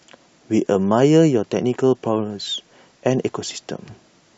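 No technical faults are audible anywhere in the recording.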